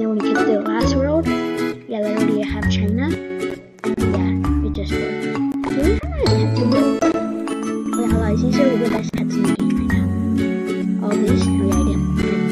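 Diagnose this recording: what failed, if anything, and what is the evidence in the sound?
The sound falls abruptly by about 6 dB from 3.15 to 3.30 s and again from 7.53 to 7.86 s, then snaps back to full level. On a waveform these show as short rectangular dips in the envelope with sharp edges. On a spectrogram they appear as uniformly darker vertical bands across all frequencies. This pattern fits one channel drops out: with one side of the stereo pair gone, the mono sum keeps only half of the shared signal.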